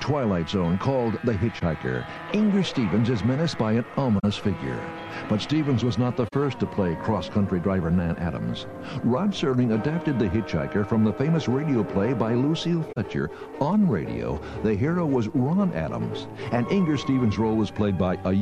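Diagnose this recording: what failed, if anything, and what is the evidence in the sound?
The fault is in the codec stage: a corrupt frame was concealed. Concealed frames sit at 1.59–1.62, 4.19–4.24, 6.28–6.34 and 12.89–12.98 s. The decoder caught damaged AAC frames and muted them or replaced them with a sign-scrambled copy of the last good spectrum. Unlike undetected corruption, there is no squeak.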